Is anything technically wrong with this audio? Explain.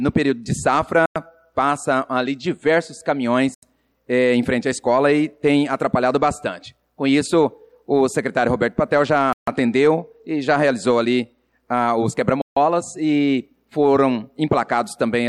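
Yes. The audio drops out four times, in a pattern consistent with a Bluetooth stall. The gaps fall at 1.06 to 1.16 s (about 98 ms), 3.54 to 3.63 s (84 ms), 9.33 to 9.48 s (146 ms) and 12.42 to 12.57 s (149 ms). Each time the sound cuts abruptly to silence, then resumes. The likely cause is radio interference delaying packets. The headphones' buffer empties, and playback halts until the retransmitted data arrives.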